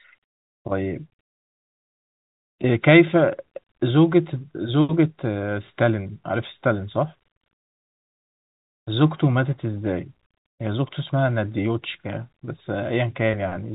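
No technical faults are audible.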